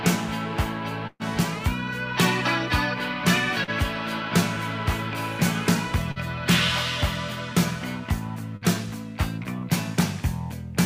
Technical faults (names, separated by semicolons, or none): burst of packet loss; short concealed packet loss